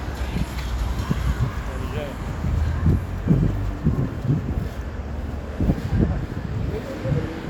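Nothing stood out as a technical problem on listening to this recording of sounds.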